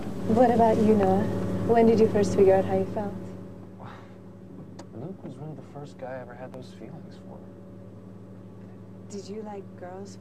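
A loud pop at 1.03–1.05 s and another at 6.54–6.56 s each stand roughly 10 dB above the sound, likely a brief voltage pulse from a switch or static.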